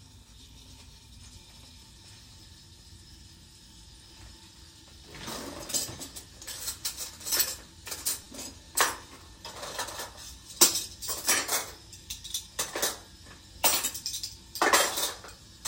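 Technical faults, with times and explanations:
8.24–8.26 s, repeated buffer: new audio arrived late, so the device replayed one short block of about 5 ms four extra times. The hard joins recurring at 5 ms intervals produce a brief buzz-like click of about 20 ms, with almost no audio lost.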